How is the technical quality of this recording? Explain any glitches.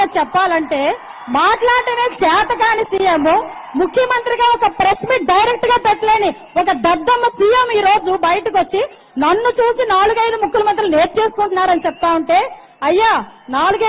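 No glitches or technical faults are audible anywhere in the recording.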